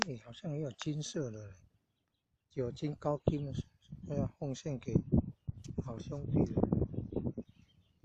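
At 4.02 to 4.05 s, compressed frames are skipped. About one frame never plays, so the audio jumps ahead roughly 50 ms, which fits a 46.4 ms frame.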